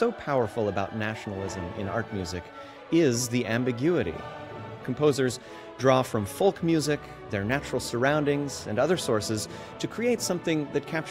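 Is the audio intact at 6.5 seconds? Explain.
No. Clock slip clicks run from 0.38 to 10.94 s: faint ticks roughly every 0.7 s, likely unsynchronised clocks slipping single samples, showing as thin vertical spectrogram lines.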